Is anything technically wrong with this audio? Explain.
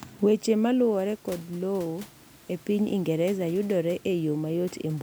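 No, nothing is technically wrong.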